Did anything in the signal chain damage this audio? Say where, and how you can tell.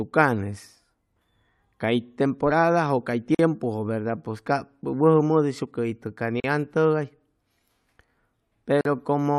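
Yes. A gap at a join of encoded pieces, from the codec stage, opens at 3.35 s (44 ms), 6.40 s (40 ms) and 8.81 s (43 ms). Untrimmed encoder delay and end padding remain. Unlike a packet dropout, speech resumes exactly where it stopped.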